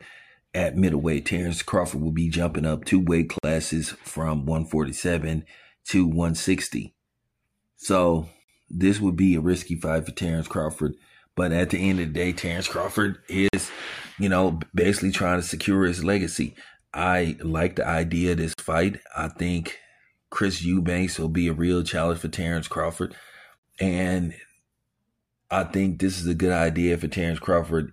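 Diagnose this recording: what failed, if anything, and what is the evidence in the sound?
Gap between chunks, at the storage or playback stage. Hard-edged 50 ms silences fall at 3.38, 8.43, 13.48, 18.53 and 23.58 s, 5.05 s apart. The audio was handled in 5 s chunks, and each join inserted silence rather than dropping sound.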